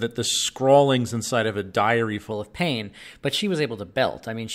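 A speech clip where, from 2.31 s to the end, just after "inside of a diary", the voice turns slightly high and hurried, about 1.47 semitones up and 1.09 times faster. This is a wrong sample rate: the samples play back too fast without conversion, which fits 44.1 kHz material played at 48 kHz.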